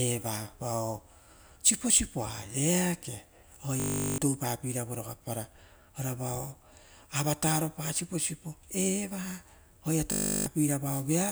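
At 3.8 s the speech gives way to a flat, steady buzz at 50 Hz that lasts until 4.18 s, and the same buzz returns from 10.12 to 10.46 s. Each is a system hang loop: the system stalled while the sound hardware kept replaying one 20 ms slice of its ring buffer. Each repeat of that slice merges into a tone. Around 0.4 s of speech is lost at the first hang and about 0.3 s at the second.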